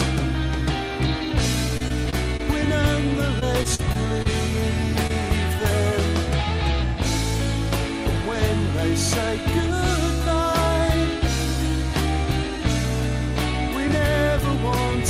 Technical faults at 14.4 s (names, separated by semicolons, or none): none